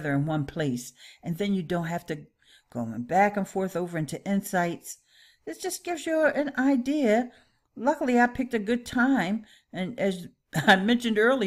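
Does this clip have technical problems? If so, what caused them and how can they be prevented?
No, there are no technical problems to report here.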